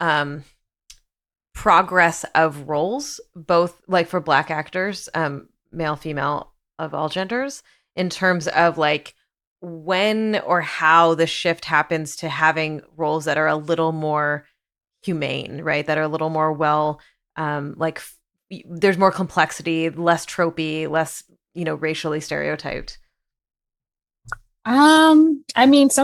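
Listening through the recording, nothing stood out as a technical problem at any point.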